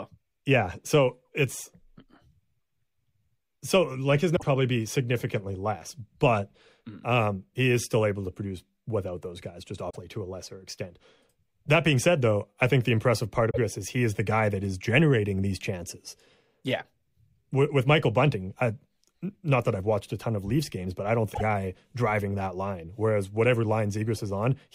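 Short disruptions in the speech at 4.33 to 4.43 s (after "so like his"), 9.89 to 9.97 s (after "without those guys just"), 13.49 to 13.58 s, and 21.30 to 21.41 s (after "games but I don't") come from damaged data in a compressed stream. Corrupted frames leave the decoder misreading them and hunting for the next valid frame header.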